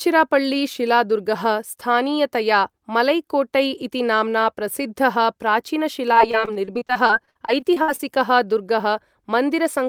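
From 6.13 to 8.01 s the speech breaks into repeated packet loss with a robotic sound. Around seventeen holes, the longest 60 ms, are patched by extending the preceding sound, covering about a fifth of the span. On a spectrogram this shows as smeared, repeated harmonic slices, and the waveform shows chopped, looped segments.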